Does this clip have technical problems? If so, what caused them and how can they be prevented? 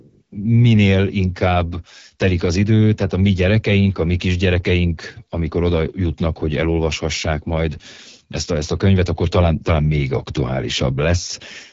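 Yes, there's AMR wideband (HD Voice) codec damage throughout. The speech sounds rough and raspy, with nothing above 7.5 kHz, which fits a low rate near 8.85 kbit/s. Prevent it by running AMR-WB at 12.65 kbit/s or higher.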